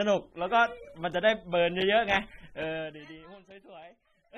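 Throughout the speech the top end is missing, with nothing above about 13.9 kHz, and the sound has a dull, smeared quality with a fizzy, warbling edge on sibilants. This is likely AAC compression at a low bitrate, which fits roughly 27 kbps AAC-LC.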